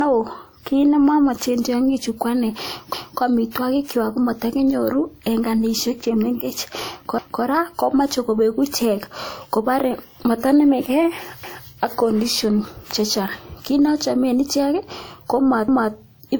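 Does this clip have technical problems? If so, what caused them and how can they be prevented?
Yes. Throughout, the speech carries smeared low-bitrate artefacts under an MP3 with a clean 20.2 kHz cut-off. It's likely low-bitrate audio saved at a high bitrate, which fits a 64 kbit/s WMA re-encoded to 192 kbit/s MP3. Keep the original source and encode only once from it.

Right after "ne ochomen ichek ko", from 15.68 to 15.93 s, there's a stutter. That's overlapping chunks: with 4-second chunks, each join repeats 250 ms of audio. Trim the overlap or crossfade properly when stitching chunks together.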